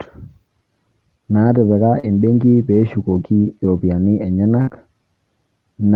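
At 1.99 s, just before "embenki peeshukoki", there is a short concealed packet loss. About 40 ms of audio never arrived, and the receiver filled the hole by carrying the preceding sound forward before blending back in. It comes across as a brief smear or wobble rather than a silence. Unlike the later burst, it is too short to fade.

The last 20 ms of that stretch, from 2.03 to 2.05 s, are a lost packet rebuilt from error correction. The next packet carried a low-bitrate copy of the missing one, so the decoder had real content to play instead of guessing. The same happens at 3.77 s, right after "naatipika embenki peeshukoki", as a single 20 ms packet. These moments sound rougher and noisier for an instant, but nothing is missing. That sets them apart from concealment, which only stretches old sound.

At 4.61 s comes a burst of packet loss lasting about 60 ms. The receiver held the last sound and turned it down as the gap went on, producing a held, fading tail. 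When the audio resumes at 4.69 s, the material in between is gone. The length and the fade distinguish it from the short concealments.

It runs straight into another short concealed packet loss from 4.69 to 4.73 s, about 20 ms long. This one is heard as a brief smear or wobble as playback rejoins.

All of this rides over an Opus call path whose top end stops at 12 kHz, with coding noise that points to a rate near 32 kbps.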